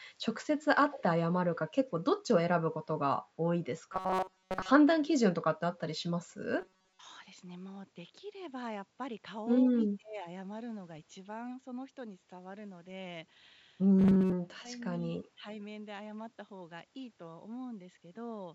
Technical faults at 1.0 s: echo leak

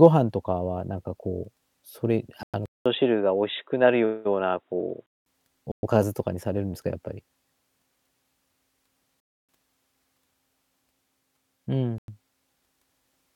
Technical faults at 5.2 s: input switched to a poorer device

